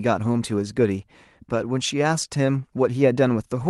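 No technical faults are audible.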